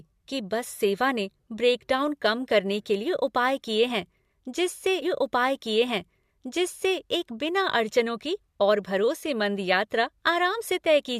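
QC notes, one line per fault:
5.01–7.00 s, stream segment repeated: the player queued one segment twice, so about 2 s of speech replays after "उपाय किए हैं जिससे", with a small blip at the jump back.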